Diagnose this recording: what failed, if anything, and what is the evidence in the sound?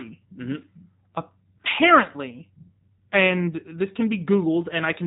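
The damage sits at the codec stage: the speech has passed through a G.729 codec for its whole length. Nothing reaches above about 3.8 kHz, and the voice carries a plainly audible rough, synthetic graininess, which fits an 8 kbit/s G.729A encode that rebuilds each 10 ms frame from a vocal-tract filter, a pitch predictor and a few pulses. A simple band-limiting filter would dull the sound without that buzzy, rebuilt texture.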